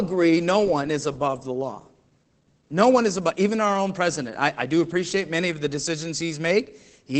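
Throughout, the speech sounds muffled and hoarse, with nothing above 8.7 kHz. This is Opus voice compression in SILK mode, coarsely coding the excitation at a rate that fits about 12 kbps.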